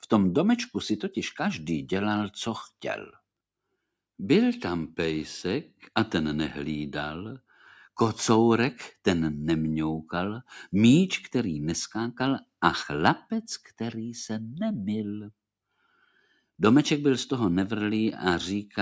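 Between 15.85 and 16.38 s, the call's noise suppressor misjudges part of the sound as background noise and pulls it down harder than everything around it, so there is sound cut by the noise suppressor. The gain dips by about 12 dB at its deepest, with roughly a fifth of a second affected in total, and that stretch sinks in level or has its tail clipped short. The call's microphone processing also limits the content to nothing above 8 kHz.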